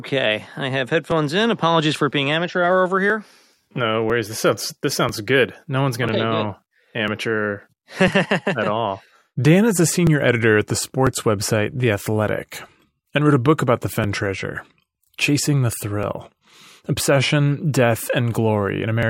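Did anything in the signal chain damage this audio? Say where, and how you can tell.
Yes, at the driver or buffer stage. Periodic USB or driver dropouts begin at 1.11 s, just after "I have", and recur every 1.00 s until 19.03 s, about twenty times. Each skips a few milliseconds of speech, heard as regular ticks, because a background task blocks the bus or driver on a fixed cycle.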